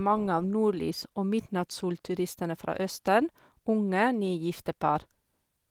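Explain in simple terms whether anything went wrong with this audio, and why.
No, nothing went wrong here.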